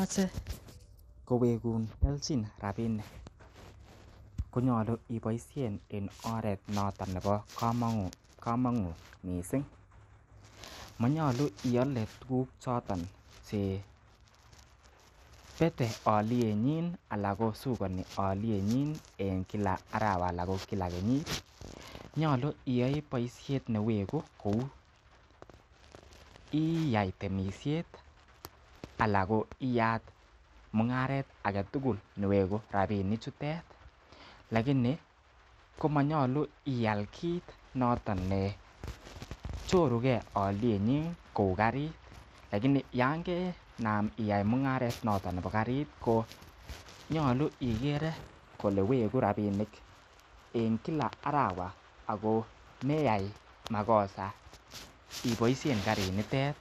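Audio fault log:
throughout, MP2 compression: dull speech with gurgling, granular distortion and nothing above 15.6 kHz, likely MP2 at a rate that fits 80 kbps; flickering sub-bands, not pre-echo, mark it.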